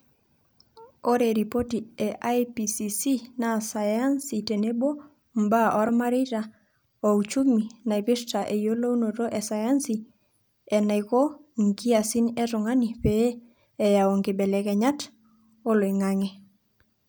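Underrun with held sample at 5.89 s: the output buffer briefly ran dry, freezing the waveform at its last value for about 1.45 ms, a gap of 64 samples, before resuming where it stopped.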